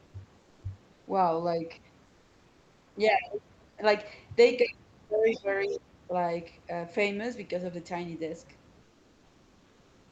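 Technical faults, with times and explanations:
0.43–0.61 s, 2.05–2.95 s and 8.83–10.12 s: comfort noise in place of the background. Here the real room background, sitting about 35 dB below the loud speech, gives way to a smooth, featureless hiss, about 1 to 3 dB quieter, for 180 ms, 900 ms and 1.29 s. This is likely Opus discontinuous transmission synthesising filler, unlike a dropout, which would go silent.
3.11–3.82 s and 4.61–6.13 s: speech suppressed in double talk. The talker's voice sinks by roughly 35 dB at its deepest, over about 0.7 s and then about 1 s, likely because the echo canceller heard both sides at once and turned everything down. Unlike comfort noise, it strikes while speech is present.
5.30–5.44 s and 5.61–5.74 s: other side's voice leaking through. Brief scraps of a second voice appear, around 20 dB and then 30 dB below the talker, inside the double-talk stretch. Likely the loudspeaker's residual echo escaping cancellation, distinct from suppression because something extra is added rather than taken away.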